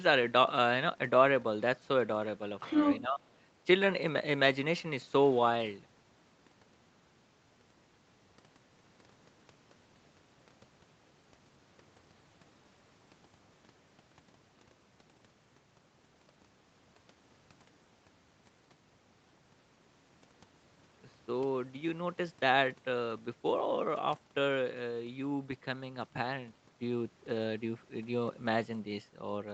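Other side's voice leaking through, 2.6 to 3.0 s: a second voice about as loud as the talker comes through, likely loudspeaker echo the echo canceller failed to remove. Speech suppressed in double talk, 3.01 to 3.21 s: the talker's voice dips by about 15 dB for roughly 0.2 s, because the canceller likely treated overlapping speech as echo and turned everything down.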